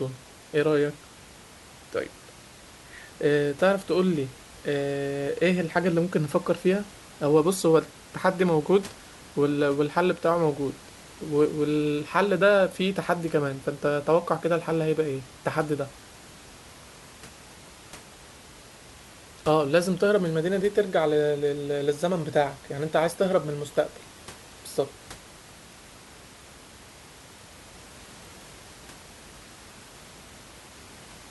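No technical faults are audible in the speech, and the only background is the room's own ambient noise, sitting about 23 dB below the talker level and belonging to the recording rather than the system.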